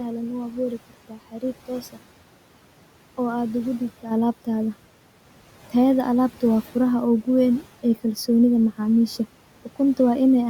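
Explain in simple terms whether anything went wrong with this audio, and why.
Between 1.09 and 1.43 s there's a short stretch of speech cut by the noise suppressor: it mistook bits of the speech for background and turned them down, so about 150 ms of sound comes out faint and swallowed. The quiet room noise underneath is just part of the recording.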